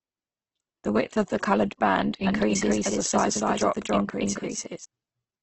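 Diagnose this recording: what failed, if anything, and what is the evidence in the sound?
Codec stage: throughout, the speech is rough and grainy with nothing above 8.1 kHz, likely heavy Opus compression at a low bitrate near 12 kbps. It is noisy rather than swirly, unlike MP3.

Capture or edit stage: from 2.27 to 4.85 s, after "of the coloured band", a doubled audio track trails about 0.3 s behind at roughly equal level, likely from a second path. It starts and stops abruptly and has no room decay, unlike an echo.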